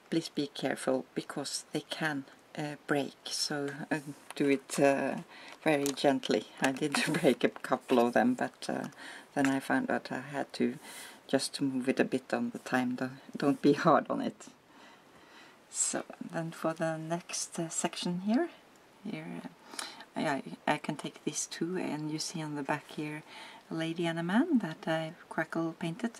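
No dropouts, clipping, glitches or other transport or processing faults are audible anywhere in the clip.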